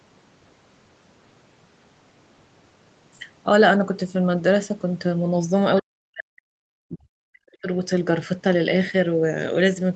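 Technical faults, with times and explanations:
5.8 to 7.68 s, speech suppressed in double talk: the speech is gated down in pieces, falling by as much as about 40 dB and adding up to roughly a second and a half of lost level. This is likely an echo canceller that, with both sides talking, mistook this talker for loudspeaker echo and attenuated it. On the waveform the envelope collapses into near-flat gaps, and the spectrogram shows the harmonics and the band up to the 8 kHz ceiling fading or vanishing in blocks.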